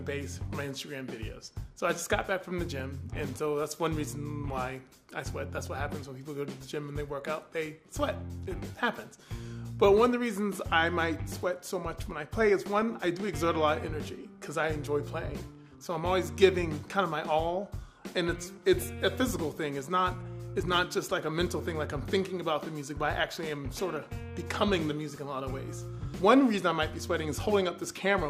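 A brief watery blip sits over the audio from 2.78 to 2.80 s, returns more strongly between 5.53 and 5.67 s, and comes back as a short blip at 18.81 s. This is DAB burbling. With weak reception, bit errors got past the error correction into the MP2 stream. Corrupted samples put short noise blips into single sub-bands, and corrupted scale factors, where they get through, make sub-bands jump in level for up to a frame. The heavier error rate in the middle event explains its harsher sound.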